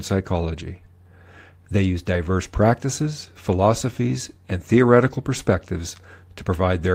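Speech with no audible faults.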